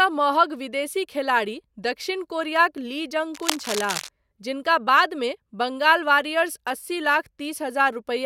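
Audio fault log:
3.34–4.09 s, cable scratch noise: just after "दक्षिण कोरियाक ली जँग", dense, uneven scratching and rustling sits over the speech for about three quarters of a second, only slightly quieter than the speech itself. A worn cable or connector being moved is the likely cause, its contact resistance jumping rapidly. Unlike isolated clicks or crackle, the bursts are packed together into a continuous rough texture.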